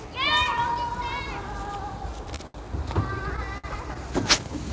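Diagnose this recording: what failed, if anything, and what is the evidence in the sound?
Short stalls from late packets empty the jitter buffer at 2.36–2.41 s, 2.47–2.56 s and 3.58–3.66 s. Each time the sound is held, then resumes exactly where it stopped. Unlike packet loss, nothing is skipped.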